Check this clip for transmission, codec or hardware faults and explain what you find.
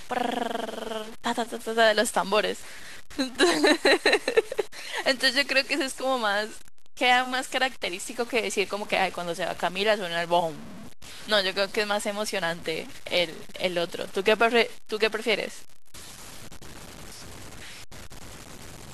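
Two faults run through the whole of this speech recording: coarse quantization and clock jitter.

Low bit depth without dither, present throughout. The likely cause is that the samples were truncated to very few bits, about 6, with no dither to decorrelate the rounding error. That error tracks the waveform, so it produces a grainy, gritty distortion that shifts with the speech. Quiet passages fare worst, breaking up or sputtering between adjacent steps, and the distortion sits around 20 dB below the signal.

Sample clock jitter, also throughout. The converter's timing wanders by a few microseconds, so each sample is captured slightly early or late. The resulting error scales with how fast the waveform is changing, which makes it strongest on loud passages and sharp, high-frequency consonants. It sits some 25 dB below the speech as a rough hiss that follows the level and disappears in pauses.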